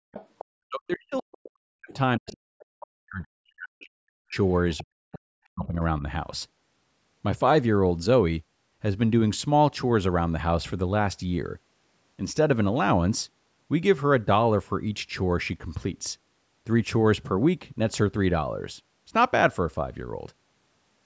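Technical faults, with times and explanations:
0.12–0.45 s and 2.3–2.35 s, other side's voice leaking through: faint scraps of a second voice, about 20 dB under the speech, likely loudspeaker echo the canceller missed.
0.59–1.92 s, 2.19–4.37 s and 4.82–5.81 s, speech suppressed in double talk: the speech dips as much as 40 dB, likely the echo canceller ducking everything while both sides talked.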